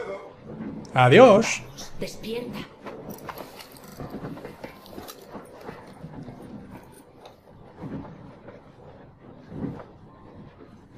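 A short stutter at 3.87 s and again at 6.95 s comes from repeated frames. A 40 ms block of compressed audio replays twice and then once, adding 80 ms and 40 ms.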